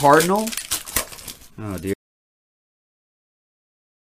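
The audio input was likely lost partway through, from a disconnected device, a failed link or a stray mute, while the recorder kept writing silence. The result is an audio dropout to silence: at 1.94 s the sound cuts off abruptly mid-flow and never returns, leaving dead silence with no room tone through to the end of the clip. Whatever happened after that point was never captured, so more than half the clip is empty.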